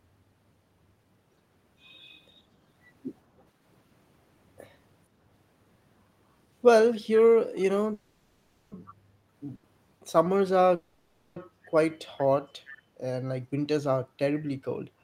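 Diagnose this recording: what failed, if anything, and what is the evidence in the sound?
Call audio freezes at 7.93–8.73 s and 10.75–11.38 s: the sound hangs as a fading buzz, then resumes where it stopped. That's likely network delay draining the jitter buffer.

Echo leak at 8.86 s and 12.68 s, brief scraps delayed about 452 ms and roughly 25–30 dB under the speech. The far-end loudspeaker's echo canceller is letting residue through, likely.

Short stall from a late packet at 9.55–9.65 s: a sound gets stretched about 80 ms while the jitter buffer waits on a packet, then carries on with nothing lost.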